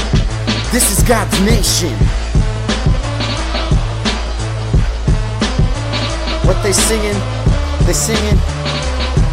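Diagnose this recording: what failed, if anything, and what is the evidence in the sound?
Nothing stood out on listening that would point to a failure at any stage of the chain.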